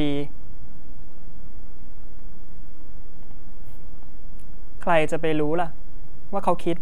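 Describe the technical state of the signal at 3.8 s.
At 3.8 s there's a DC offset, present through the whole clip: the waveform sits shifted off zero by about -17 dBFS, eating headroom, inaudible and showing only as steady energy at the very bottom of the spectrum.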